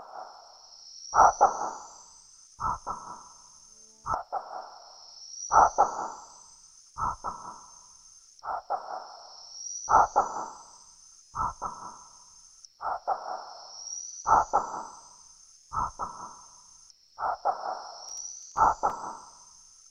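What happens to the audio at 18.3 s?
The processor falls behind and misses roughly ten buffers of around 10 ms each, skipping them, so processor overload crackle tears through the sound from 18.09 to 18.57 s.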